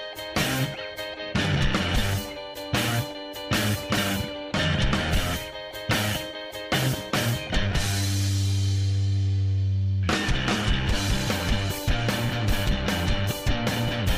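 No technical faults can be heard anywhere in this audio.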